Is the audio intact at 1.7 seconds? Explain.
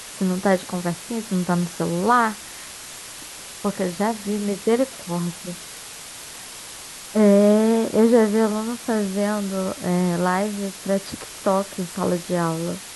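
No. At 1.7 seconds, as across the whole clip, the speech carries low bit depth with dither. The hiss is steady and even, sitting only around 15 dB below the speech, which fits a signal reduced to about 5 bits. Because random dither was added before each sample was rounded to so few levels, the rounding error is spread into broadband white noise rather than forming distortion tied to the speech, so the result is a constant hiss with no gritty or harmonic artefacts.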